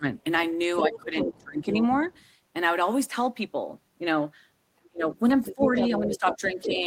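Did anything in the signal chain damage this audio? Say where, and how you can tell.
Yes, in the call processing. The talker's speech is ducked hard in three spots: 0.00 to 0.04 s, 0.81 to 1.8 s, and 4.92 to 6.84 s, dropping around 20 dB at worst. That's speech suppressed in double talk, likely the echo canceller turning down both its own talker and the loudspeaker echo when it couldn't tell them apart.

There's also the other side's voice leaking through, from 0.49 to 2.26 s, roughly 5 dB under the talker, and again from 5.44 to 6.86 s, about 10 dB down. This is likely far-end loudspeaker sound the echo canceller didn't fully strip from the mic, so it overlaps those ducked stretches.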